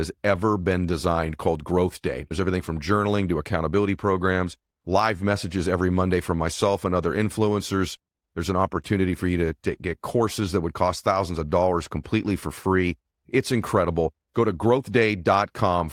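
Clock drift between sender and receiver runs through this speech recording: the sending clock is slow by roughly 3 percent, so the receiver's jitter buffer keeps draining, and small timing hiccups recur at uneven intervals. Repeated timing corrections follow from 0.16 s to 15.80 s, with the receiver repeating short pieces to stay in step. The speech plays at about 97 percent speed, stretched by around 0.4 s overall.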